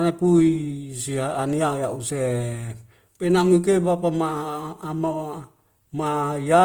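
Throughout, the speech likely went through Opus compression at a low bitrate, near 24 kbps, so its tones turn plainly rough, grainy and noisy.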